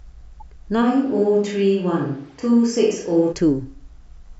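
At 0.4 s a corrupt frame decoded produces a faint glitch, around -45 dBFS, lasting about one frame. Flipped bits were decoded as wrong gains or codes, which put energy at the wrong frequencies.

From 0.83 s to 3.31 s the sound abruptly becomes roomy and hollow, with thinner bass. The likely cause is a switch to a distant microphone. The level barely changes, so this is not a simple gain drop. What sets it apart is the sudden reverberant colour, room noise roughly 35 dB below the speech, and an equally abrupt return.

From 2.29 s to 2.32 s a second corrupt frame decoded gives a louder glitch, near -40 dBFS, spread over roughly four frames.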